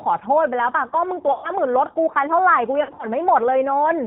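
The speech passes through the G.729 codec from start to finish, plainly audible. Rebuilt from a vocal tract filter, a pitch predictor and a few pulses per frame, with nothing above 4 kHz, it sounds rough, band-limited and slightly synthetic, which fits an 8 kbit/s G.729A link.

From 1.32 to 1.51 s, VoIP packet loss concealed by the speech codec means the decoder must fill about 120 ms of missing audio, which points to a run of six lost packets. It stretches its last pitch and filter into a buzzy tone or coloured noise that fades. From 2.83 to 3.07 s, a similar 120 ms of loss is scattered over about 200 ms, in runs no longer than 60 ms. This leaves repeated brief concealed stretches, and the sound stays weak and distorted as the decoder recovers between the gaps.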